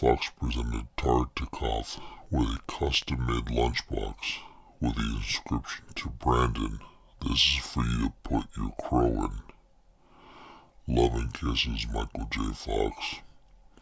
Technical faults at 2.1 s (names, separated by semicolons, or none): wrong sample rate